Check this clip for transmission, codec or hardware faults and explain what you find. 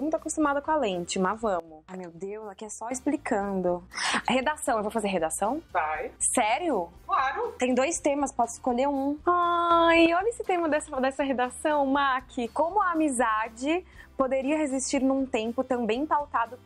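Two sudden gain jumps: from 1.6 to 2.91 s the level drops about 12 dB, and from 9.71 to 10.06 s it rises about 6 dB. Both likely come from gain applied without a ramp. Sound and background noise shift together, visible as abrupt waveform-envelope steps and uniform spectrogram brightness changes.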